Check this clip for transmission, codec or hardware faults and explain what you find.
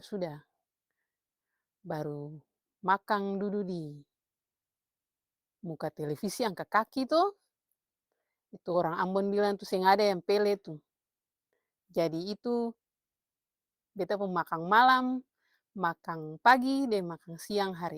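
No faults can be heard anywhere in this speech.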